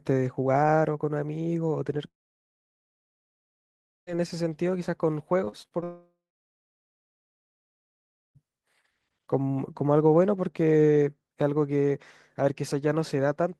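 This is a speech clip, and it has two long network dropouts, at 2.07 to 4.09 s and 5.84 to 8.37 s. Each time the last bit of sound is stretched into a short fading buzz or hiss, then there's near silence for about 2 s and 2.2 s before the audio picks up again with that stretch simply gone, likely because nothing arrived from the network. Right before the second dropout, from 5.45 to 5.84 s, there's repeated packet loss with a robotic sound: about five quick holes, the longest around 34 ms, each patched by looping the previous sound. Close to 30 percent of that span is concealment, so it comes out choppy.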